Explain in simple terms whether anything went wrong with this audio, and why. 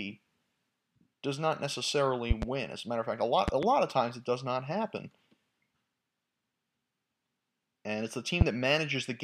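Three bursts of sharp loud pops land on top of the speech, which carries on underneath: a quick double pop at 2.31 to 2.45 s after "does not necessarily", another double at 3.48 to 3.66 s after "matter of fact a", and a single louder one at 8.41 to 8.44 s after "it's the". These are likely sudden electrical jolts, such as from a plug, a switch or static.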